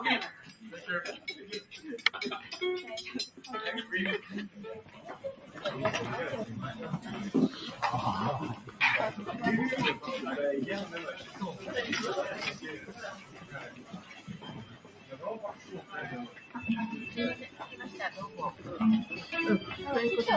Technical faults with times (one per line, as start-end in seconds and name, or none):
0.00-20.36 noise suppressor applied to music or sounds
0.33-1.78 sound cut by the noise suppressor
4.22-5.59 sound cut by the noise suppressor
8.56-8.80 sound cut by the noise suppressor
11.19-11.66 sound cut by the noise suppressor
12.54-16.55 sound cut by the noise suppressor
17.43-18.67 sound cut by the noise suppressor